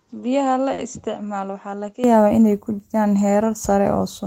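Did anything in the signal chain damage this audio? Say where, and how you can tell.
Yes. At the capture stage the input was likely switched to a poorer device for the opening 0.0 to 2.04 s. That stretch is about 10 dB quieter, has nothing above 7.6 kHz, and carries a different noise floor roughly 55 dB down. The tone changes with no gap at the switch.

In the network path, a late packet caused a short stall at 0.73 to 0.80 s. The jitter buffer ran dry, and the receiver stretched the preceding sound for 50 ms until the packet arrived. Nothing is lost, but that moment is held unnaturally long.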